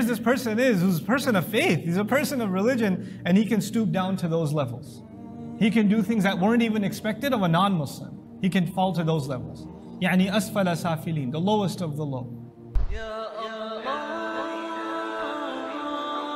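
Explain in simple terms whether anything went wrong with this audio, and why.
Nothing went wrong with this audio; no faults are audible.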